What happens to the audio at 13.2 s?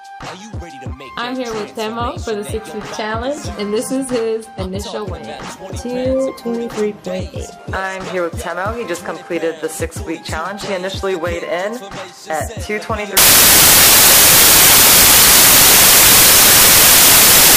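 At 13.17 s the audio turns into samples built from the wrong bytes and stays that way to the end. The reader assembles each sample's bytes misaligned or in swapped order, so the rapidly varying low bits dominate, producing loud, harsh broadband noise, close to white on loud passages.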